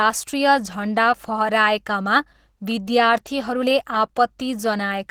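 Throughout, the speech has a hoarse, grainy roughness, likely from Opus compression at a low bitrate near 16 kbps in its hybrid speech mode, though bandwidth stays full.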